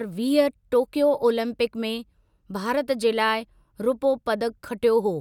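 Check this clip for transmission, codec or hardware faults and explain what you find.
No fault can be heard in this speech recording. There is nothing to single out at any point in it.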